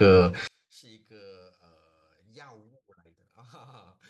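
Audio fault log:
0.47–4.09 s, one channel inverted: the speech nearly vanishes, about 37 dB quieter, likely from one channel's reversed polarity cancelling the shared centre when summed to mono.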